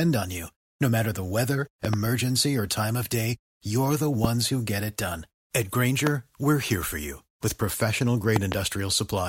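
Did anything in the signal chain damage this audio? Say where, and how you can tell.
Yes. Loud pops, likely voltage spikes entering the analogue wiring, sit on top of the speech, which carries on underneath. There is a double pop at 1.85–1.96 s after "matter the weather", single pops at 4.24–4.27 s and 6.07–6.09 s (just before "we're here for you"), and another double at 8.36–8.54 s after "for you with professional". They peak around 15 to 20 dB above the speech. On a waveform each shows as a tall isolated spike, and on a spectrogram as a thin vertical stripe spanning the whole frequency range.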